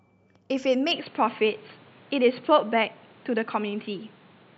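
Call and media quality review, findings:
Input switched to a poorer device, 0.92 s to end: speech abruptly dull, nothing above 4.5 kHz, no gap, same level. New noise floor roughly 30 dB down, unlike a codec bandwidth drop; likely a mic change.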